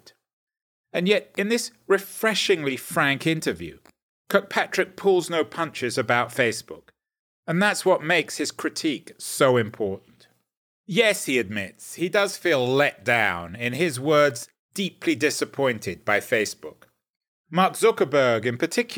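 From 11.53 to 17.51 s, sample clock jitter mistimes samples, adding hiss about 30 dB down that swells with loud speech, visible as broadband spectrogram haze.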